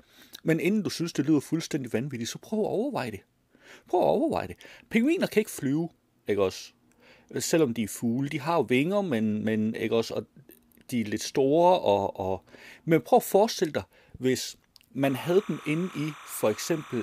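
From 15.03 s to 17.03 s, just after "at forestille dig hvis", timecode bleed appears: linear timecode leaking in from a neighbouring track or cable, around 20 dB below the speech. Its square wave flips between pitches near 1 and 2 kHz, a chirping warble that fits 29.97-frame code. Unlike a single steady whistle or hum, it keeps jumping between two tones.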